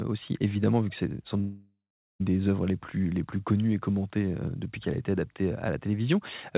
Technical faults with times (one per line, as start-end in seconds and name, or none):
1.40-2.23 long network dropout